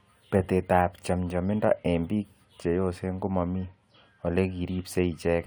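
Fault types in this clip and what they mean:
Nothing stood out on listening to this speech recording.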